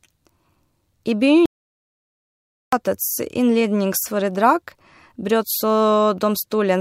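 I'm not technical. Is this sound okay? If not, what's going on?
No. There is an audio dropout to silence from 1.46 s to 2.73 s, where the speech stops mid-flow and about 1.27 seconds of audio is missing. The gap is total silence, with not even the faint background hiss of the room, which tells you the recording lost its input rather than the speaker pausing. The likely cause is a brief loss of the microphone signal, such as a loose connection or an accidental mute. Whatever was said during that stretch is gone.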